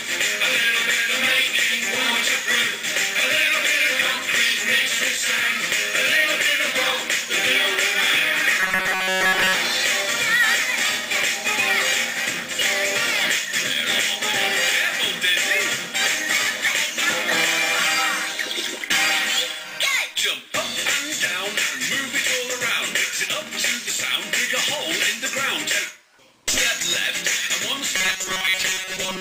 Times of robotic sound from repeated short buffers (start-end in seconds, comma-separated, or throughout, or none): 8.60-9.56, 27.97-29.20